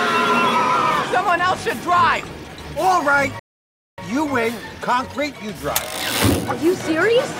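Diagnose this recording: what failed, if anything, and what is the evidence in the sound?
Playback failed with a rebuffering stall. The sound drops to silence at 3.39 s and resumes unchanged at 3.98 s. Nothing is lost; about 0.59 s is added.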